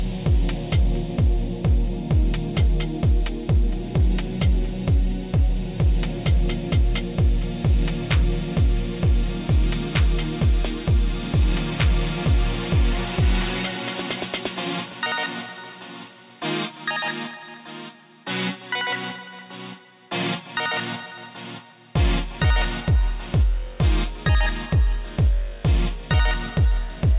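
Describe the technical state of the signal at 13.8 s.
At 13.8 s the signal is intact, with only the steady narrowband character of a telephone-style call path, nothing above 4 kHz, and no dropout, glitch or other fault at that moment.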